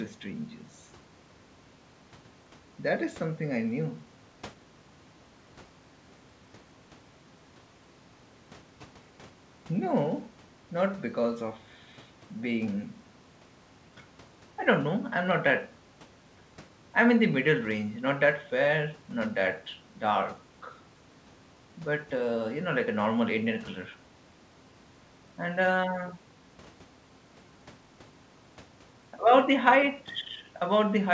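No technical faults can be heard in this speech recording. It has come through a working call path, and the lack of any content above 8 kHz fits a wideband codec such as G.722.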